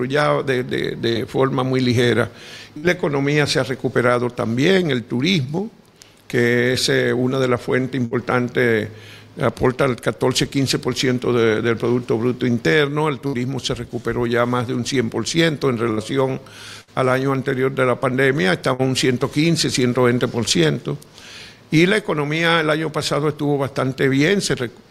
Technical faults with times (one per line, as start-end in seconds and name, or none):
1.09-1.18 burst of packet loss
2.77-2.86 burst of packet loss
8.05-8.14 burst of packet loss
13.27-13.36 burst of packet loss
15.91-16.00 burst of packet loss
16.81-16.90 burst of packet loss
18.73-18.82 burst of packet loss